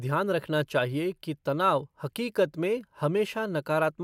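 Nothing in the speech stood out as a technical fault on listening.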